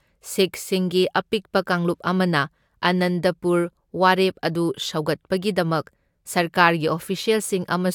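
No technical faults are audible anywhere in this recording.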